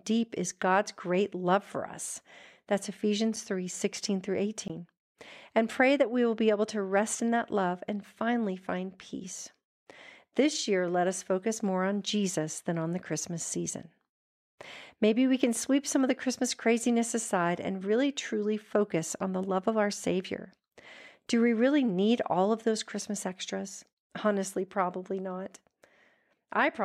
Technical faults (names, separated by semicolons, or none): block of digital silence